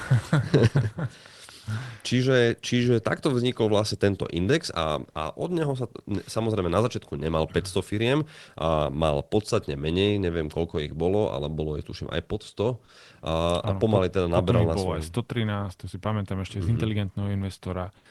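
At 17.97 s, in the last moments of the speech, comfort noise takes the place of the background for about 80 ms, until 18.05 s. The real room sound, sitting about 34 dB below the loudest speech, gives way to a smooth, featureless hiss. That hiss is about 4 dB quieter. The likely cause is Opus discontinuous transmission: the sender stops sending in the pause, and the receiver fills the gap with synthetic noise. Across the clip, the call path cuts off the highs above 12 kHz.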